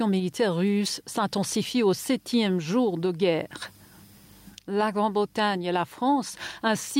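Nothing in the audio stands out as a technical fault, so there's nothing here to flag or track down.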